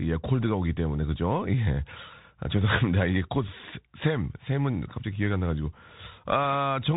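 From start to finish the speech sounds boxed-in and telephone-like, with a granular hiss beneath it, sibilants turning scratchy, and louder bright sounds breaking up into distortion. Nothing passes above about 3.8 kHz. This is the Bluetooth CVSD headset codec, and its damage is plainly audible. It sends one bit per sample saying only up or down, with an adapting step size, which fits a 64 kbps stream. When fast, loud high content changes quicker than that step can follow, the waveform is misdrawn.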